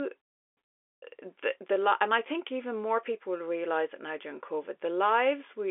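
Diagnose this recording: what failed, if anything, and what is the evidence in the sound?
Nothing has failed here: the speech has simply come down a G.711 telephone line, so it lives between about 300 Hz and 3.5 kHz with nothing above about 3.7 kHz, which is just what a phone call is supposed to sound like.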